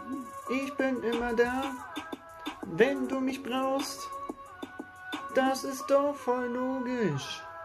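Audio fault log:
No faults heard anywhere in this recording.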